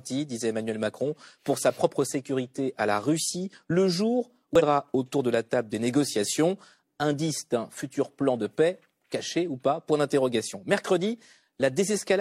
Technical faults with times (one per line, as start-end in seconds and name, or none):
4.55-4.62 damaged data in a compressed stream